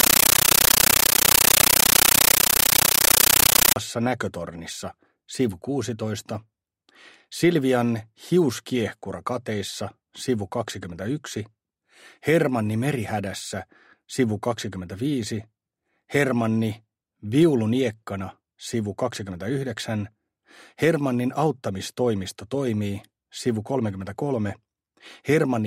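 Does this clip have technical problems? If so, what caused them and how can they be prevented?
Yes. From 0.0 to 3.76 s you get very loud, chattering static in place of the sound, the classic compressed stream played as audio fault. Something handed a Dolby Digital (AC-3) bitstream straight to the output as if it were ordinary samples. Each frame comes through as a 13.3 ms blast of noise followed by silent padding, repeating 31.25 times a second, which gives that buzzy stutter. The density points to a high-rate stream, around 640 kbps. To prevent it, make sure the receiving device either decodes the bitstream or recognises it as passthrough data.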